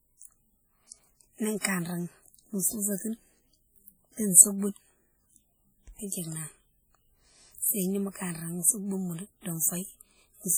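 Throughout the speech there is a ringing, washy quality with hiss that swells and fades along with the voice, and quiet detail smeared or missing. This is heavy WMA compression, likely from a low-bitrate encode that fits about 32 kbps, spreading quantisation noise over long transform blocks.

From 1.62 to 1.65 s a brief hiss runs ahead of a sharp onset, softening its attack. This is pre-echo: the loud attack sat late in a codec block, so noise sized for it spilled back about 26 ms into the quieter moment before.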